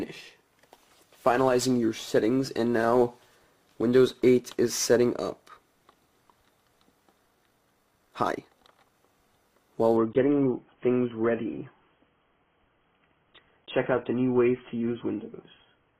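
From 7.26 to 8.94 s the pace suddenly jumps to roughly 1.89 times normal speed while the pitch stays put, so the passage comes across rushed. That's the signature of a time-stretched section, likely where software squeezed this stretch to fit a shorter slot, dropping tiny pieces to hold pitch instead of simply playing it faster.

Then at 9.97 s the quality falls off a cliff with no gap, which is the adaptive stream at a lower bitrate kicking in. Codec artefacts rise. It stays that way right through to the end. The jump in degradation fits a switch from a rendition around 96 kbit/s AAC down to something near 16 kbit/s after the connection slowed.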